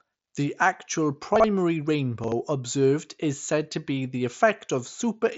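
At 1.36 to 1.44 s and again at 2.24 to 2.32 s, just before "observed is said to", the speech stumbles with chunks out of order. Two adjacent 40 ms pieces swap places, so each moment sounds briefly scrambled. Unlike a dropout or a stutter, no sound is missing or repeated. The same material simply plays in the wrong sequence, through a band that stops near 7.7 kHz.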